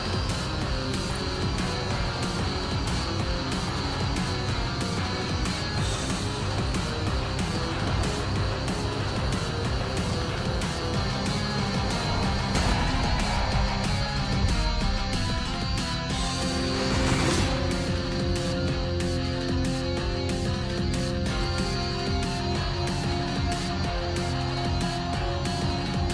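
No technical faults can be heard anywhere in the clip, so there is nothing to describe in time order.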